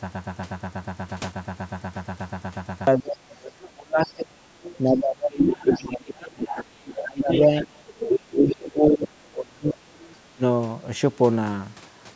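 From the very start the clip is already caught in a broken-record loop that runs to 2.87 s. A piece about 121 ms long repeats exactly, back to back, roughly two dozen times, most likely because the player or stream stalled and kept resending the last fragment it held. The audio that belonged in that span is gone. A stutter or packet-loss concealment would vary or fade, but here every cycle is identical, at about eight repeats per second.

From 2.98 to 6.44 s comes speech suppressed in double talk, likely an echo canceller that could not separate the talker from the loudspeaker echo while both sides spoke and so turned the near side down, by about 30 dB at its deepest. Inside that span, from 4.10 to 4.78 s, the other side's voice leaks through about 20 dB below the talker, likely echo the canceller failed to remove.

A second, much stronger leak runs from 5.39 to 8.53 s, only about 5 dB under the talker, so a second voice sits almost level with the first. 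It overlaps a second suppression from 6.97 to 9.75 s, again dipping about 30 dB. A weaker leak follows from 9.68 to 10.14 s at about 15 dB down, and a brief suppression of about 25 dB hits between 10.34 and 10.43 s.

Two things separate these from similar faults. The suppression pumps the talker down only while the other voice is present, unlike a dropout, which cuts out regardless of what else is happening. The leaked voice arrives at a lower level, behind the talker, rather than as a clean second channel of crosstalk.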